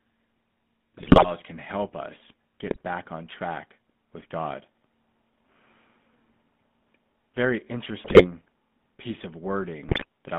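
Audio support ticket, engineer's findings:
Buzzy, gravelly roughness throughout, band limited to roughly 150 Hz to 3.5 kHz. Probable component: GSM full-rate codec, consistent with its 13 kbps mode. Pulse-excited vocal-tract model with a coarse excitation leaves audible codec damage and no highs.

Squawks, pops and gargling at 0.98–1.29 s (before "can help us"), 2.67–2.81 s (between "can help us" and "back on track with"), 8.04–8.26 s, and 9.88–10.04 s (after "piece of"). Probable cause: GSM bit errors corrupting decoder filter, pitch and gain values, distorting frames.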